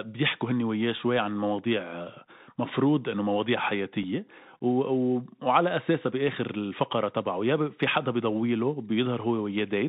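Bluetooth CVSD headset codec, throughout the speech: the sound fits a 64 kbit/s CVSD link, where each sample is coded as a single up-or-down step whose size adapts. Nothing above 4 kHz survives, s sounds turn scratchy, loud bright passages distort as the step lags behind, and a granular hiss sits plainly under everything.

Unconcealed Bluetooth headset packet loss at 4.03 s: about 3.8 ms of speech, likely a single packet between headset and phone, drops out and is replaced by silence or an idle pattern, leaving a brief hard-edged gap, with the speech returning quieter for a moment.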